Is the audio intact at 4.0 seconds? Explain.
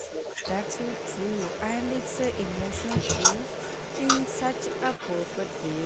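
No. At 4.0 s, as throughout the clip, there is an echo leak: a copy of the speech returns about 0.36 s late, only slightly quieter, likely because a loudspeaker's echo canceller let it through. Spectrograms show each harmonic pattern repeated 0.36 s later; waveforms show doubled bursts.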